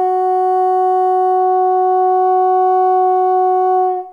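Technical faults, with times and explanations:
No technical faults, with times and explanations, turn up in this music.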